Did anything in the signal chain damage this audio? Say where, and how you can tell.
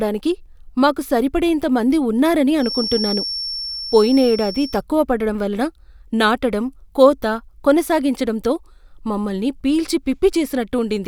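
Yes. From 2.56 s to 4.83 s, just after "మాకు సరిపడేంత మంది ఉన్నారని" and ending before "పడడం వలన నాటడం కోత", a thin, steady feedback whistle at 5.4 kHz sits behind the speech, roughly 10 dB below it and swelling and fading slowly in level. This is likely an acoustic loop between a loudspeaker and the microphone, with the gain held right at the edge of feedback, so a single frequency keeps ringing without building into a howl.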